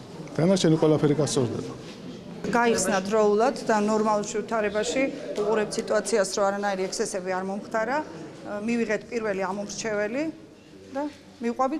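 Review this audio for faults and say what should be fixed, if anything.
There's one bit error spike, a single sharp tick at 4.52 s. It sounds like one corrupted sample: a bit flipped somewhere in memory or on a digital link, so the value jumped by a power of two for an instant and snapped straight back. That's why it's a bare broadband click with no connection to the surrounding audio, peaking at about -37 dBFS. It's easy to repair by interpolating across that one point. To prevent a repeat, check the digital transfer path and use error-checked links or storage so flipped bits get caught before they land in the audio.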